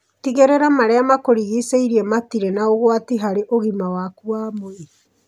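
No technical faults are audible anywhere in the speech.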